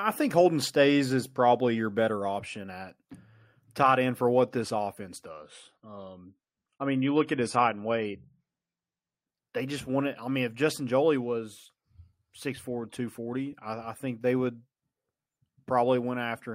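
At 5.27 s, right after "for what this offense", the speech switches abruptly to an adaptive stream at a lower bitrate, with no gap at the join. For 4 s, until 9.27 s where "they just wanted I" follows, nothing is present above 11.4 kHz and compression artefacts become more audible. The sudden loss of treble points to a drop from roughly 96 to 32 kbit/s AAC while the connection slowed, then a return to the higher tier.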